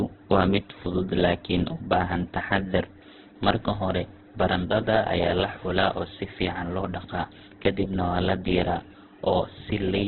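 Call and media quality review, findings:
Speech muffled and band-limited the whole way through, nothing above about 4.3 kHz. Texture's grainy, rough and noisy, heavy damage. Likely Opus compression in CELT mode, starved of bits, something around 8 kbps. Thin bands get filled with noise instead of real detail.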